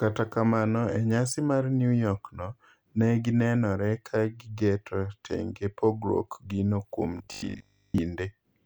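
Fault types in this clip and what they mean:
Robotic sound from repeated short buffers: from 7.18 to 7.98 s the speech turns into a rigid metallic buzz locked at 50 Hz, mostly repeats. Audio likely arrives too seldom, so a 20 ms chunk is replayed while real audio is skipped.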